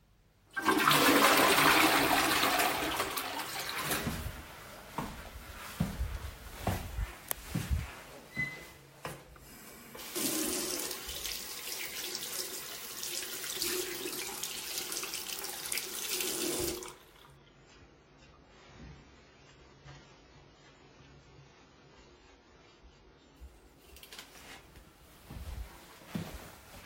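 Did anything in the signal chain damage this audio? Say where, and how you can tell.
Yes. The damage is at the network and codec stage, a stretch of adaptive stream at a lower bitrate from 17.36 to 23.36 s. Without any gap, the sound abruptly loses its top end and turns swirly and smeared with codec artefacts, then snaps back after six seconds. On a spectrogram, everything above 7.6 kHz is empty for that block, a flat ceiling with sharp vertical edges. The player switched to a much lower-rate rendition while throughput dipped, which fits a drop from a comfortable AAC rate to something near 16 kbit/s.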